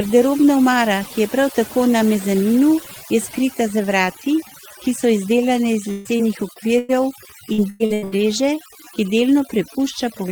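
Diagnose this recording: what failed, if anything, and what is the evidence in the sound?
Overdone noise removal runs through the whole clip, at the call-processing stage. The suppressor pulls individual frequency bands far down whenever they sit near its noise estimate, so the background falls to near silence sprinkled with twinkling specks, and quieter parts of the speech are stripped along with the noise. On a spectrogram the gaps between words are almost empty, with isolated bright dots, and the speech harmonics have ragged, hollowed-out patches.

Repeated packet loss, heard as a robotic sound, is a network fault that hits two stretches: 5.91 to 6.91 s and 7.53 to 8.20 s. In each, packets go missing again and again, and every hole is bridged by extending the last received sound, giving a choppy texture with fragments missing. About 28% of the first span and about 55% of the second is patched, with the longest holes around 135 ms and 99 ms. 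A spectrogram shows repeated smeared, frozen blocks interrupting the speech. The waveform shows unnaturally regular, looping segments.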